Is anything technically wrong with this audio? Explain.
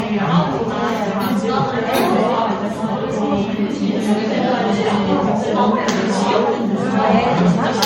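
Yes. Throughout, the sound is swirly, hollow and smeared, with blurred attacks, likely from generation loss: roughly ten lossy MP3 passes, consistent with about 64 kbit/s. A spectrogram shows patchy spectral holes and nothing above 16.6 kHz.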